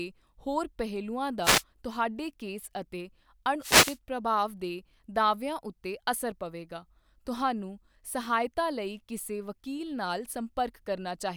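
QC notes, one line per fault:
1.42 to 1.63 s, wireless microphone noise hit: a short swish of static lasting about 0.2 s between "ਹੋਰ ਪਹਿਲੂਆਂ" and "ਤੁਹਾਡੇ ਕੇਸ ਅਤੇ", as the radio link from an analogue FM microphone fades and receiver noise rises over the speech. Unlike a digital dropout, the sound is masked by hiss rather than cut to silence.
3.60 to 3.98 s, wireless microphone noise hit: a longer burst of static, about 0.38 s, between "ਤੁਹਾਡੇ ਕੇਸ ਅਤੇ" and "ਪ੍ਰਭਾਵ ਦੇ", where reflections cancel the radio signal and the receiver's noise covers the speech. It swells and recedes with the fade, unlike steady broadband hiss or a single click.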